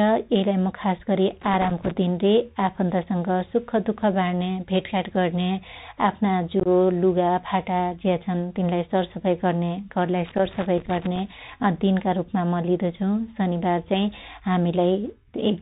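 A speech recording carried over a Bluetooth CVSD headset codec for its whole length. The damage is plainly audible. Nothing above 4 kHz survives, so the sound is narrow and boxy. A granular hiss sits under everything. The encoder sends only an up-or-down decision per sample, which fits a 64 kbps CVSD link. Its adaptive step cannot keep up with loud, bright sounds. So s sounds turn scratchy and peaks break up. Loose connector crackle appears twice. The first burst runs from 1.41 to 1.91 s, between "मु खास गरी" and "दिन रे". The second runs from 10.25 to 11.20 s. Both are irregular bursts of crackle and scratching. This is what a worn or dirty contact does when it moves. It keeps making and breaking, chopping the signal. Any DC on the line turns each break into a pop. Unconcealed Bluetooth headset packet loss hits between 6.60 and 6.67 s. About 37.5 ms of audio goes missing, scattered over 60 ms. 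The longest single gap is 22.5 ms. That pattern points to a handful of lost voice packets between headset and phone. Silence or an idle pattern was put in their place, with no attempt to hide the holes. The result is brief holes in the speech with abrupt edges.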